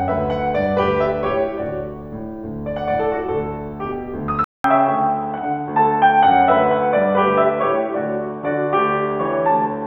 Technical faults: input switched to a poorer device

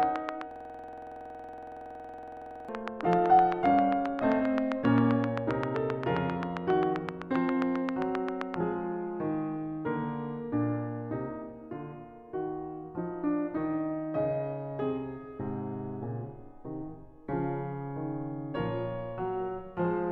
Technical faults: train of clicks; system hang loop

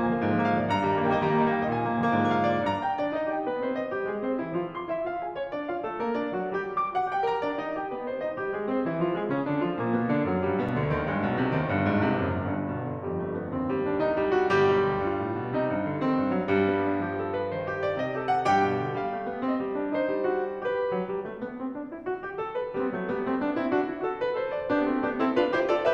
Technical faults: block of digital silence

